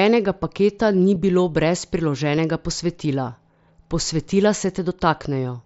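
Concealed Bluetooth headset packet loss occurs at 1.15 s, between "paketa ni" and "bilo brez", and again at 2.37 s, just after "paketa ni bilo brez". Each time, about 7.5 ms of audio never reached the phone, which fits a single lost frame, and the receiver filled the gap by repeating the best-matching stretch of recent waveform. Because each dropout is so short, each patch is nearly inaudible within the mSBC wideband sound.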